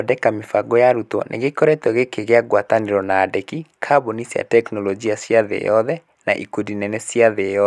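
No technical faults detected.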